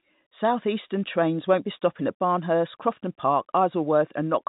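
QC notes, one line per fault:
No faults to note in this speech clip.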